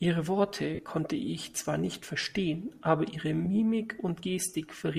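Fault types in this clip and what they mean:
Lost LE Audio frames: The speech briefly turns into a grainy, noisy smear, once from 0.75 to 0.79 s and again in a shorter blip at 3.45 s. The first gap lasts about 40 ms, which fits four 10 ms frames. The second is about 10 ms, one frame. When Bluetooth LE Audio packets go missing, the LC3 decoder refills each gap by reusing the previous spectrum with scrambled signs, so pitch and clarity dissolve into hiss.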